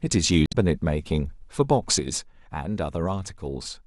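At 0.46 s a short glitch cuts into the speech, lasting until about 0.55 s. That is damaged data in a compressed stream: a run of corrupted or missing bytes left the decoder unable to read those frames, so it lost its place and resumed only once it found the next valid frame header.

At 2.00 s the whole signal drops abruptly by about 6 dB and stays quieter through to the end. The speech and the background noise fall together in a single step, with no fade between the two levels. This is a sudden gain jump, likely caused by a digital gain change applied from one sample to the next without any ramp, such as a level setting switched instantly or a one-bit shift halving the amplitude.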